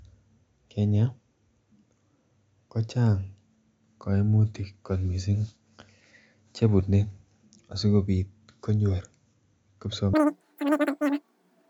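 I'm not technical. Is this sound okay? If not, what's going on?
No. From 10.13 s to the end at 11.69 s, the speech suddenly plays three times too fast. It also jumps up in pitch by about 19 semitones, so it sounds squeaky and rushed. This fault is called wrong sample rate. The audio is played back at a faster rate than it was recorded, with no correction. That fits sound recorded at 16 kHz being played at 48 kHz. Speed and pitch rise together.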